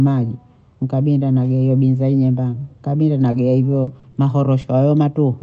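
Speech carried over an Opus call path, its highs stopping at 8 kHz, with three kinds of packet trouble clustered late in the clip. From 3.27 to 3.29 s, a lost packet rebuilt from error correction fills 20 ms with a rougher, noisier low-bitrate copy. The continuity shows the copy came from the following packet: no gap, only a brief grainy texture. From 3.31 to 3.35 s, a short concealed packet loss leaves 20 ms the decoder never received. It is patched by extending the preceding sound, which smears or wobbles briefly rather than coarsening. Overlapping it, 3.33 to 3.35 s is another 20 ms error-correction rebuild, giving the same rough texture. From 3.83 to 5.17 s, repeated packet loss produces robotic, choppy sound. Four separate gaps totalling 120 ms, the longest 40 ms and about 9% of the stretch, are each filled by continuing the last sound. Unlike the single blips earlier, the holes keep recurring, and roughly a tenth of a second more is rebuilt from error-correction copies in between.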